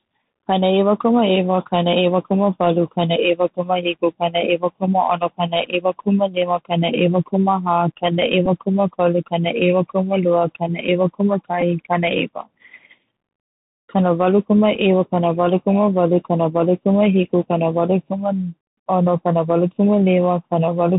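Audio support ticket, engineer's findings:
Bluetooth CVSD headset codec, whole clip: band hard-limited to 4 kHz, scratchy s sounds, granular hiss riding under speech. Probable component: headset voice link; the 1-bit delta modulator's step size lags loud high content, which fits 64 kbps CVSD. Hiss and slope-overload grit separate it from a plain low-pass.

Bluetooth headset packet repeated, brief buzzes at 8.46 s and 11.61 s and a small tick at 14.75 s, spanning about 7.5, 11.2 and 3.8 ms. Probable cause: lost headset-to-phone voice packets with the previous packet's bits re-decoded, which fits roughly one to three packets. Gaps are filled rather than silent, setting this apart from dropouts.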